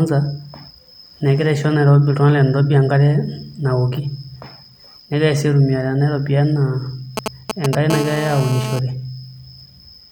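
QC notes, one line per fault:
7.17–7.75 s, GSM signalling bursts: a galloping dit-dit-dit of short raspy 217 Hz buzzes, roughly as loud as the speech. A nearby 2G phone is sending brief groups of radio bursts while signalling, and the audio circuitry rectifies each pulse into sound.
7.90–8.79 s, GSM phone buzz: a hard, steady, harmonic-rich 217 Hz rasp about 10 dB below the speech and unrelated to it. A nearby 2G phone in an active call transmits bursts 217 times a second, which the audio circuit demodulates into this continuous buzz.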